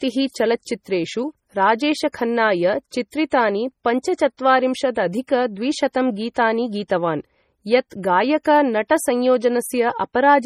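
MP3 compression, likely, affects this speech clip from start to finish. The damage is heavy, which fits a low bitrate around 32 kbps. Starved of bits, the encoder drops weak frequency lines that flicker between frames, giving a watery, swirling texture, and nothing remains above 15.9 kHz.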